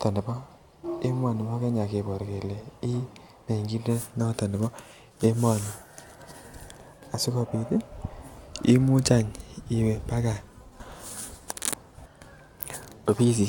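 No technical faults are audible.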